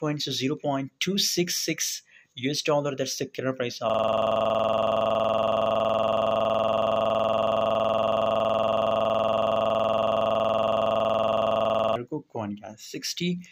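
From 3.90 to 11.96 s, a system hang loop: the system froze and one 46 ms chunk, fitting a 2048-sample buffer, repeats at 21.5 Hz as a rough buzz.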